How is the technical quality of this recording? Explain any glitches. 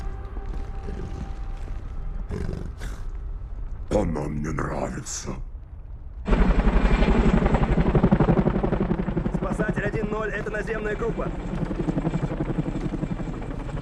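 The main problem is a train of clicks near the end, from 11.11 s to 13.78 s. It's a steady ticking at 14 clicks per second, evenly spaced, about forty in all, each one hitting roughly as loud as the sound itself. Every pulse has much the same shape, so it reads as a mechanical tick-tick-tick sitting on top of the audio and carrying on through any gaps. The likely cause is interference from nearby equipment or a faulty connection or power supply injecting a pulse over and over.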